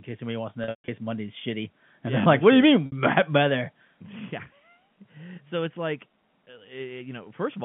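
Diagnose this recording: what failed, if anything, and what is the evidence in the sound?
Network stage: packet loss with pitch repetition. From 0.64 to 0.88 s, losses scattered over 240 ms (longest run 140 ms) become held, buzzy tones that fade into silence. At 2.86 to 2.92 s, a 60 ms gap sounds briefly sustained. The receiver repeated the last pitch period and faded it out.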